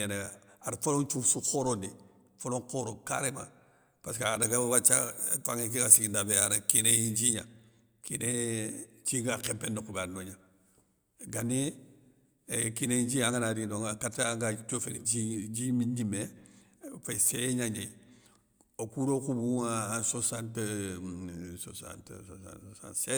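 A speech clip with one fault: pre-emphasis left on, from 4.42 to 7.34 s, starting just after "pésskeu a". The treble was boosted for recording or transmission, but the matching cut was never applied on playback. High frequencies stand about 11 dB above the 1 kHz level at 10 kHz. That rise fits the 50 microsecond FM emphasis curve. The sound turns thin and bright. Sibilants become harsh and hissy.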